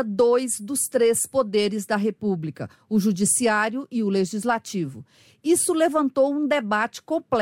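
Nothing in the speech stood out as a technical fault on listening.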